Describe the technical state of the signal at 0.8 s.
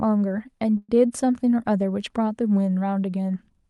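At 0.8 s the speech stops and is stretched into a fading buzz for about 112 ms, then about 20 ms of silence, from 0.77 to 0.91 s. This is likely a call audio freeze: delayed packets drained the jitter buffer, the receiver extended the last sound, and playback resumed with nothing lost but everything after it about 112 ms later.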